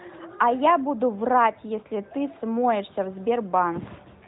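No faults in this speech; the 4 kHz band limit and faint synthetic edge are simply the AMR narrowband mobile codec working as intended, at a light level of coding damage that fits its 12.2 kbps top mode.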